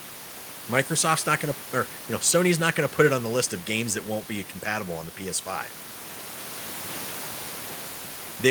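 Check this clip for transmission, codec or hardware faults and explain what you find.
The speech signal comes through intact with no technical faults, and the only other sound is background noise from the room where it was recorded, sitting about 19 to 22 dB below the speech.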